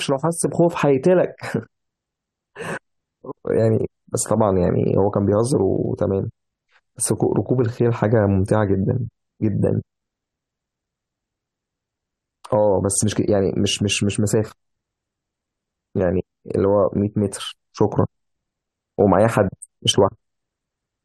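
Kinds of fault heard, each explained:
No technical faults heard.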